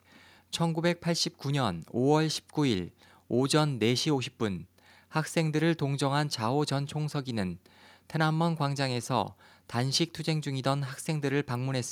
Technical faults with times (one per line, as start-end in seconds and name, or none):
none